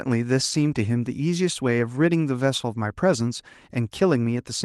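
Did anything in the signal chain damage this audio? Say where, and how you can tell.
Yes, at the network stage: a lost packet rebuilt from error correction, at 0.49–0.59 s and 3.15–3.21 s. Both stretches turn briefly rougher and noisier with no gap. That fits lost Opus packets replaced by the low-bitrate redundant copies carried in the following packets, about 60 ms and 40 ms of audio.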